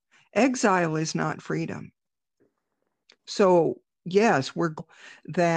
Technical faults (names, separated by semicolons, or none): damaged data in a compressed stream